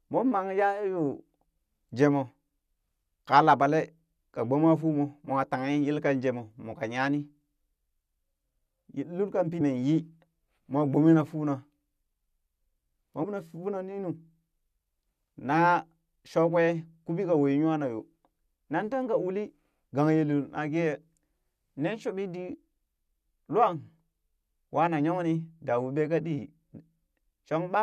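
Damaged data in the compressed stream makes the decoder misread frames and lose sync twice, hunting for the next valid header each time. It comes out as a brief glitch at 9.60 s, then another from 13.23 to 13.25 s.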